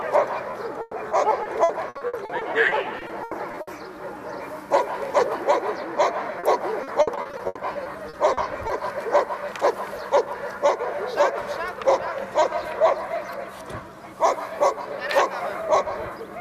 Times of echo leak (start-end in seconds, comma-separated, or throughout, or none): none